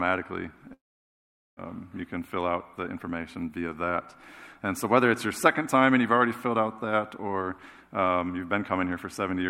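From 0.73 s to 1.60 s the stream most likely suffered a long network dropout: for roughly 0.84 s no audio reached the receiver, and that stretch was never played. The receiver stretched the last sound it had into a brief fading buzz or hiss, then held about 0.79 s of silence before playback resumed further on, with the lost portion simply absent and the sound jumping forward.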